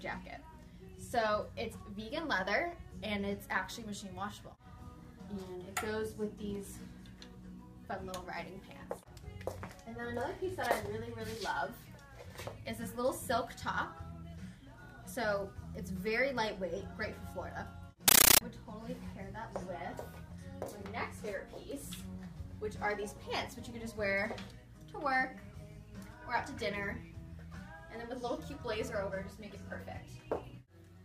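From 18.08 to 18.41 s, the sound gives way to a compressed stream played as audio. Encoded Dolby Digital (AC-3) data reached the output as if it were ordinary samples, with no decoding. Each frame comes out as a 13.3 ms burst of noise, then silent padding. The bursts repeat 31.25 times a second. The result is harsh, very loud, chattering static. That frame pattern fits a high-bitrate AC-3 stream.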